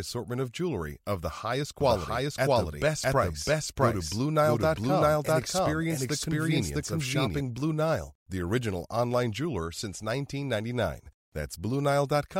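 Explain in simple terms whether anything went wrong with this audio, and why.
Yes, from 1.81 to 7.41 s there is a doubled audio track. The same speech plays twice, the copy about 0.7 seconds behind and just as loud. It is likely a second recording path or an edit. It is not an echo: the copy never fades or sounds roomy, and starts and stops abruptly.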